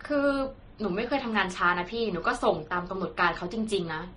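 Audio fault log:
Throughout: transcoding between lossy codecs. The speech carries two layers of codec damage at once: the artefacts of each codec are heard together, and nothing comes through above about 10.6 kHz, so the top end sounds dull. That mix points to a likely chain of a low-rate MP3 pass, around 35 kbit/s, re-encoded to Vorbis near 26 kbit/s. The second encoder wasted its bits on the first one's artefacts, and the lower cut-off of the two stayed.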